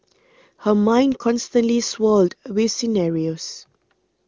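No technical faults can be heard in this speech recording.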